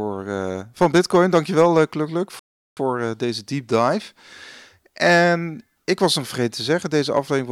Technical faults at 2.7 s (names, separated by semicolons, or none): rebuffering stall